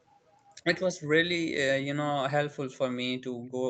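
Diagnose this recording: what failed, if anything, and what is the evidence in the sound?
The trouble sits in call processing, on the far end's loudspeaker side. Right at the start, 0.1 to 0.21 s and again 0.37 to 0.56 s, there's a faint delayed copy of the speech trailing about 243 ms behind, very quiet, roughly 35 to 40 dB under the main signal. That's an echo leak. The likely cause is an echo canceller that didn't fully subtract what its microphone picked up from the loudspeaker, so a residue got sent back down the line.

Near the end, from 3.35 to 3.54 s, the room background dips hard, as much as about 40 dB at its deepest, for around a fifth of a second, then comes straight back. That's background gated by the echo canceller. While the far end's speaker was playing, the canceller clamped the microphone down to suppress echo, and the room tone went with it. Everything rides over an Opus call path with content topping out at 8 kHz.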